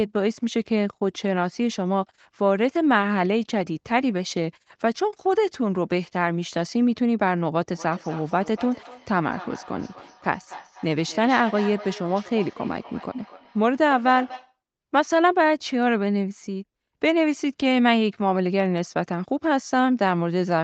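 From 7.74 to 14.58 s the speech comes back as a thin, ringing repeat about a third of a second behind itself, peaking at about 16 dB below the voice: feedback echo between two devices, where one device replays the other's microphone audio and that microphone recaptures it.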